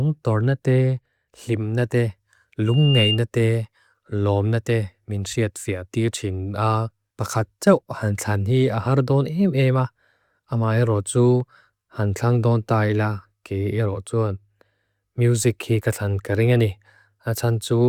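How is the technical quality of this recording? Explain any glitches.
The recording has one clear fault, a burst of loudspeaker feedback squeal. From 2.66 to 3.20 s, just after "tornate timnate", a piercing tone near 2.8 kHz swells over roughly a third of a second and ends up a little louder than the speech. The microphone was picking up its own loudspeaker, and at that frequency the loop's gain exceeded one, so the tone fed on itself.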